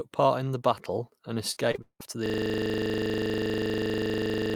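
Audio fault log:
1.51–2.02 s, repeated packet loss (robotic sound): Right after "in the battle and", the audio breaks up in four quick dropouts within half a second. Each missing stretch is papered over by stretching out the sound just before it. About 270 ms is filled this way, roughly half the span, and the longest hole is 185 ms. Another 260 ms or so is simply gone. The repeated, smeared-over patches give a choppy character with pieces missing.
2.26 s to the end, system hang loop: From here the audio freezes into one 40 ms fragment that repeats exactly, 58 times, until the clip ends. This is what happens when the computer or driver stalls but the sound hardware keeps replaying the same small ring buffer. At 25 repeats per second, the loop sits between a low buzz and a rapid machine-gun stutter, and nothing new is heard after the freeze.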